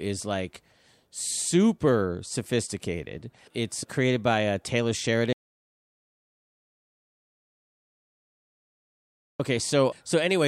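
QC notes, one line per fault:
5.33 to 9.40 s, audio dropout to silence. The speech cuts off abruptly mid-flow at 5.33 s. About 4.07 s of silence follows, with no room tone or background noise at all. The speech then resumes just as abruptly at 9.40 s. Whatever was said in that span is missing. The input signal was likely lost through a disconnected device, a failed link or a stray mute while the recorder kept writing silence.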